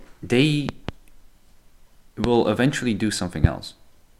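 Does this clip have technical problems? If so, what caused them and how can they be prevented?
Yes, the speech carries four loud pops. Between 0.69 and 0.91 s, two sharp pops land in quick succession, peaking around 15 dB above the speech. Single pops, each around 20 dB above the speech, occur from 2.24 to 2.27 s, just before "eventually do", and from 3.44 to 3.47 s, just after "eventually do". Each is likely a sudden voltage step from a connector, switch, static discharge or driver glitch, shaped by the downstream circuitry into a thump while the speech continues beneath it. Prevention: secure and inspect cables and connectors, avoid switching or replugging during recording, and control static near the signal chain.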